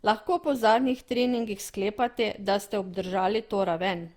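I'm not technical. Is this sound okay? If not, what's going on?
No, not quite. All the way through, the speech sounds swirly, hollow and a bit smeared, with the starts of sounds blurred. That's generation loss, likely from being squeezed and unpacked again and again, something like five times, each pass adding its own damage.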